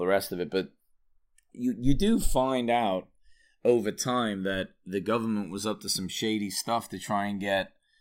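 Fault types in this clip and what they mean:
Channels drifting apart: left and right run on mismatched clocks, consistent with an error of roughly 150 ppm, so their offset grows to about a millisecond by the end. Summed to mono it flanges slowly, and a spectrogram shows comb notches sweeping steadily downward.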